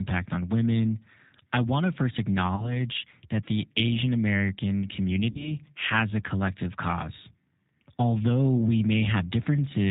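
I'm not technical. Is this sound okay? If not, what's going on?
No. Throughout the clip, the speech has been squeezed through the G.729 codec, a very compact phone-call format. Instead of sending the actual sound, it sends a rough recipe for the voice that the receiving end rebuilds. Everything above 4 kHz is thrown away, and the rebuilding is imperfect. The result sounds muffled and phone-like, with a clearly rough, slightly artificial, robotic edge to the voice.

There are also two moments of VoIP packet loss concealed by the speech codec. Small chunks of the call never arrived: about 20 ms near 2.56 s and about 40 ms near 5.31 s. The receiver filled each gap by guessing from the sound just before it. That produces a brief buzzy or smeared patch, and the voice stays weak and distorted until about 2.81 s and 5.51 s.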